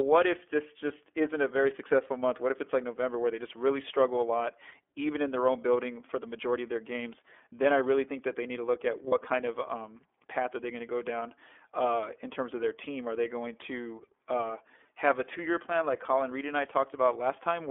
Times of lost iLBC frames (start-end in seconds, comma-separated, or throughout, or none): 9.09-9.13